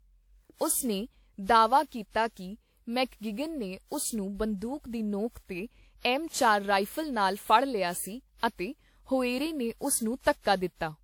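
From start to finish the speech sounds swirly, hollow and smeared, with blurred consonant attacks, more damage than a single encode at the rate it suggests (about 96 kbit/s) would cause. This is likely generation loss: roughly seven lossy re-encodes of a WMA-style codec, each re-quantising on a shifted frame grid so noise piles up.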